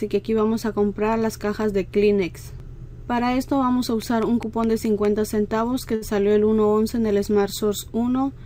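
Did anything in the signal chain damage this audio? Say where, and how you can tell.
Yes. Between 4.02 and 5.06 s a train of clicks, about seven near-identical pulses peaking about 5 dB above the sound, ticks at a regular 4.9 per second. Unlike random crackle, the evenly paced identical shape points to likely interference in the analogue wiring or a faulty connection or power supply.

At 5.95 to 6.04 s there is a short stall from a late packet at the network stage. The jitter buffer ran dry, so the last sound was stretched for 59 ms, adding 59 ms of delay. Unlike a dropout, nothing is lost: sound is held, not gapped.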